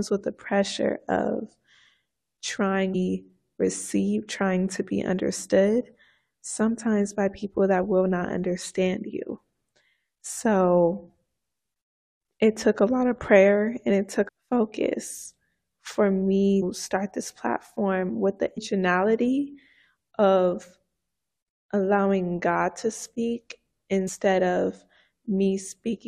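At 2.94 s, 14.27 to 14.29 s, 16.61 s, 18.57 s and 24.07 to 24.09 s, the speech breaks into short chirps or blips caused by damaged data in the compressed stream. Corrupted bytes make the decoder misread frames, lose sync and search for the next valid frame header.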